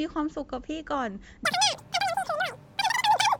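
A speech clip. From 1.45 s to the end, the wrong sample rate makes the sound run three times fast and about 19 semitones high. That fits 16 kHz audio played at 48 kHz.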